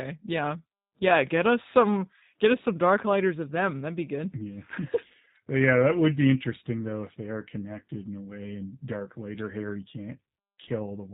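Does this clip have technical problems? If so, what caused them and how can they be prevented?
Yes. Throughout the speech there is plainly audible G.729 codec damage: nothing above 4 kHz is present, and the voice has a rough, slightly synthetic quality. This is consistent with G.729A at 8 kbit/s. The codec discards the waveform and rebuilds each 10 ms frame from a vocal tract filter, a pitch predictor and a few pulses, so fine detail is lost. To prevent it, negotiate a wideband codec such as G.722 or Opus for the call.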